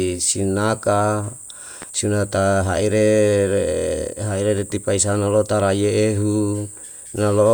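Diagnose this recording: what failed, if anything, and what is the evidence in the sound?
A loud pop at 1.82–1.85 s, before "si nata", peaks above the speech: a vertical spectrogram stripe and waveform spike, likely an analogue-wiring voltage step.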